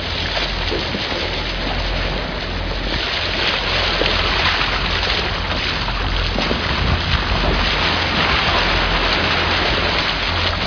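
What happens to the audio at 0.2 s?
Nothing goes wrong at 0.2 s; the audio plays through that moment intact, with no dropout, click or other fault.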